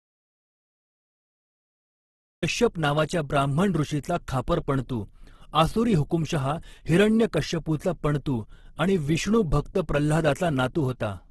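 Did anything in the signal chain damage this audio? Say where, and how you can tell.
Yes. The recording opens in an audio dropout to silence that is already under way at 0 s and lasts until 2.42 s, when "नावाच्या ब्राह्मण ऋषीचा खापर" starts abruptly. The waveform is a flat line of silence, with no room tone, which points to lost input at the capture stage, likely a disconnected or muted source.

The speech throughout is rough and grainy, and nothing is present above 12.1 kHz. On a spectrogram this appears as a hard ceiling, with the upper bands filled with speckled noise rather than clean harmonics. That is likely Opus compression in its music mode, and the heavy damage fits a bitrate of about 12 kbps.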